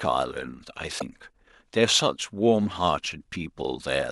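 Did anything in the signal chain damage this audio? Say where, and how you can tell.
Yes, at the codec stage: damaged data in a compressed stream gives a brief disruption from 0.96 to 1.02 s, where the decoder misreads corrupted frames and resyncs.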